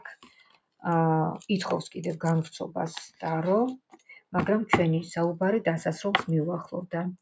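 A noise suppressor built for speech stayed active through the whole clip, treating sustained parts of the sound as noise and pulling them down by a swing of around 10 dB, so held material pumps and thins while attacks pass through more intact. From 0.00 to 0.84 s, and again from 3.79 to 4.33 s, the suppressor cut this sound harder than the rest, dropping it by up to about 21 dB for much of each span, so steady or decaying parts sink and tails end abruptly.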